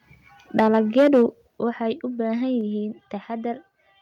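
From 0.58 to 0.66 s the loudest syllable crackles harshly, likely microphone overload: input driven about 4 dB past the converter's ceiling, flattening a small share of peaks. A single step down in level at 0.6 s follows, likely microphone volume stepped down by software, about 2 dB. Between 0.97 and 1.23 s a longer, harsher overload, likely around 5 dB over, cuts off roughly a fifth of the waveform tops. Unlike clipping, the further step-downs at 1.59 s (about 6 dB) and 2.61 s (about 3 dB) add no distortion. Voice and background drop together at once, likely from automatic gain control reacting to the earlier peaks.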